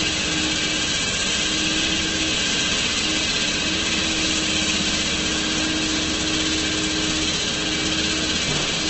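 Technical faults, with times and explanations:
Throughout, Opus compression: sound turns grainy and rough with nothing above about 8.2 kHz, not MP3-like swirl, likely from low-bitrate CELT band filling.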